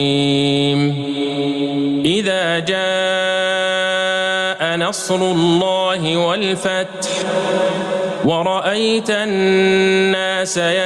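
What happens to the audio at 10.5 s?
At 10.5 s the audio is still affected by gain pumping, which runs through the whole clip. The level is pulled down on each loud sound, a swing of around 20 dB. The likely cause is excessive input gain with a fast limiter pulling the level down.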